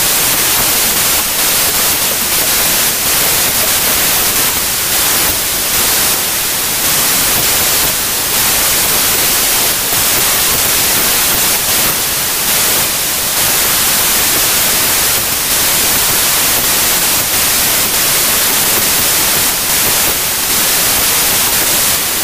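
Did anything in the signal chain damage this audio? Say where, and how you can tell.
Yes. The damage is a wrong sample width at the sample-format conversion stage, present throughout. Loud noise buries the speech, which runs about 1.33 times fast and high. That fits packed 24-bit samples read as 32-bit integers, misaligning bytes across sample boundaries.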